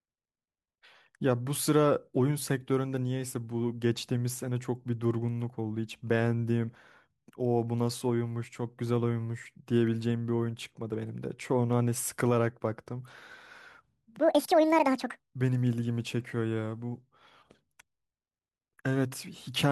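A section at the wrong speed runs from 14.2 to 15.2 s. That stretch of speech plays at 1.89 times its recorded speed, so pitch and tempo jump together, roughly ten semitones higher and hurried. The likely cause is playback or editing against the wrong clock.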